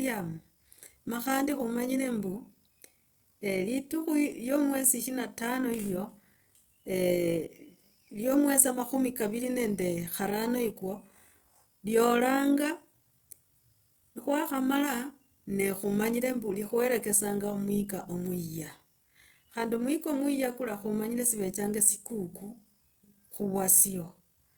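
The speech carries overlap-add ripple throughout. Windowed frames were rejoined with an overlap whose gains don't sum flat, so the level swings by about 6 dB once per frame, around 50 times a second. Unlike mains hum, this ripple rides on the sound and vanishes in pauses.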